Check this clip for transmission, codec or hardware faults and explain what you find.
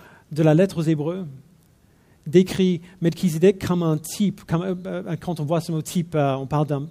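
No transmission, codec or hardware faults turned up here.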